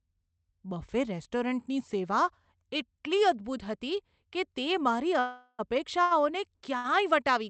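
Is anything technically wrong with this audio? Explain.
Yes, the speech has a call audio freeze and two short stalls from late packets.

Call audio freeze, 5.19 to 5.61 s, just after "હતી કે તે મારી": packets were likely held up in transit, so the jitter buffer ran dry. The receiver continued the last sound for about 0.39 s, letting it thin into a fading buzz or hiss with about 30 ms of near-silence. When the packets arrived, the speech resumed where it had stopped. Nothing is lost, but a 0.39 s hole sits in the delivery.

Short stalls from a late packet, 6.03 to 6.13 s (shortly after the same words) and 6.77 to 6.86 s: in each case a single packet missed its playout time. The jitter buffer emptied briefly, and the receiver stretched the preceding sound by about 79 ms and then about 69 ms before continuing. Each one leaves a syllable held too long, with a faint buzz or dip in level. No speech is dropped.

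The audio passed through an Opus call codec at 40 kbps, with its band limited to 8 kHz.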